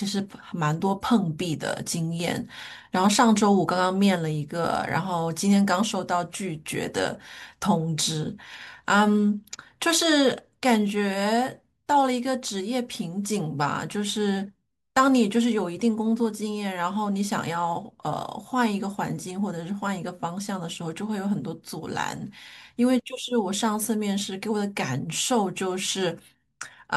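A recording of speech with no technical fault to be heard anywhere in it. No point in the clip calls for a time, a cause or a fix.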